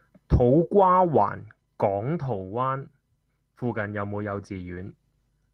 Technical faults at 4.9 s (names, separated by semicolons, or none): call bitrate drop